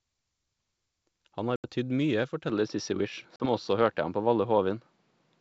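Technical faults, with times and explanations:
1.56 s and 3.36 s, packet loss on an ADPCM call: two hard-edged holes in the speech, about 80 ms at 1.56 s and about 40 ms at 3.36 s, each filled with silence. Because the receiving ADPCM decoder lost track of the sender's adaptive predictor and step size during the gap, the speech comes back slightly distorted before it resettles. On a waveform each shows as a flat-line gap; a spectrogram shows a blank vertical slot.
2.50 s to the end, input switched to a poorer device: at 2.50 s the sound abruptly turns duller and more boxy, with nothing above 5.8 kHz, a level step of roughly 5 dB, and a new noise floor appearing around 40 dB below the speech, with no silence at the change. The likely cause is the system swapping to a narrower-band microphone or headset call profile mid-recording. A spectrogram shows the upper band cut off cleanly at that moment and a faint uniform noise wash beneath; the waveform shows a small step in amplitude.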